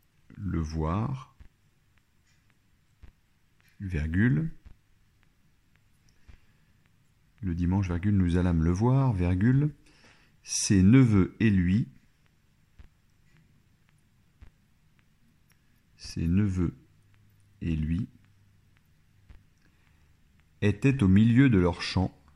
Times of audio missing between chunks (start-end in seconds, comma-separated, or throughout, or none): none